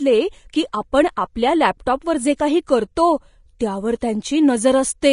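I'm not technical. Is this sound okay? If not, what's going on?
No. The speech sounds hissy and grainy throughout, with dulled treble and nothing above 10.5 kHz. This is likely Vorbis compression squeezed too hard.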